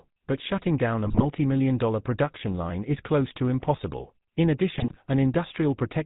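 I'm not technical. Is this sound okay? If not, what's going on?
No. The whole clip has a buzzy, gravelly roughness with the brighter top of the voice missing. That is the GSM full-rate codec, an old mobile-phone method that rebuilds speech from a simplified model of the throat and cuts off everything above 4 kHz. There are also GSM bit errors: the voice breaks into squawks and gargling from 1.04 to 1.26 s, between "but shutting down a" and "million dollar production line", and again from 4.78 to 4.97 s. Corrupted data reached the phone's decoder, which then rebuilt those moments wrongly.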